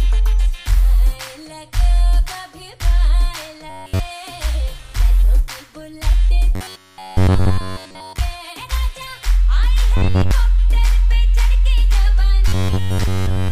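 Robotic sound from repeated short buffers at 3.70–4.00 s, 6.55–8.18 s, 9.97–10.31 s and 12.48–13.51 s: a rigid buzz near 94 Hz, likely from a roughly 11 ms buffer looped when input lagged. It is fully repeated in the first two spans and mostly repeated in the last two.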